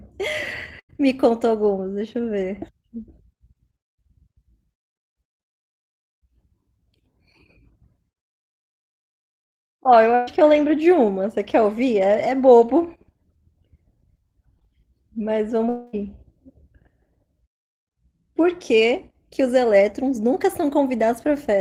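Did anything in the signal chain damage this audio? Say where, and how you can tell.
Yes. Burst of packet loss on the network path at 0.79–0.91 s and 10.15–10.29 s: the receiver extends the last sound as a fading buzz or hiss, then speech resumes with 100–120 ms missing.

Short concealed packet loss at 3.95–3.98 s and 14.59–14.63 s: brief smears where the decoder bridged about 20 ms of undelivered audio by continuing the preceding sound.

At 15.69–15.95 s, speech gives way to a fading hold lasting about 240 ms, then returns further along. This is likely a long network dropout, with the lost stretch concealed rather than played.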